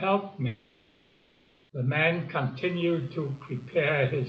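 A speech recording carrying two faults. From 0.47 to 1.71 s, about 1.2 s of the audio is missing, most likely from a long network dropout: the receiver fills the whole gap with a synthetic continuation of the last sound that fades into a smeared buzzy hiss, so the waveform shows a low, featureless envelope and the spectrogram a blurred band with no speech structure. Speech returns afterwards with that stretch gone. From 2.57 s to the end, a mains buzz sits about 30 dB below the speech. It is a raspy 60 Hz hum whose switching spikes put harmonics up into the kilohertz range, drawn on the spectrogram as evenly spaced horizontal lines running beneath the speech.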